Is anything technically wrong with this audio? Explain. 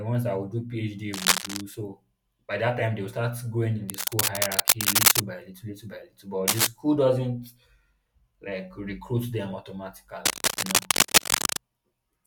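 Yes. Cable scratch noise occurs from 1.13 to 1.61 s, 3.89 to 5.20 s, 6.48 to 6.67 s and 10.25 to 11.61 s. A worn cable or connector likely shifted, its contact resistance jumping erratically and producing dense, ragged scratching that rises above the speech by about 5 dB.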